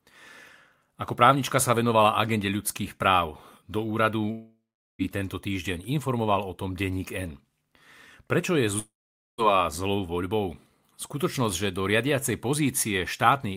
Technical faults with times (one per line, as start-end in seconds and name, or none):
4.31-5.02 long network dropout
8.79-9.41 long network dropout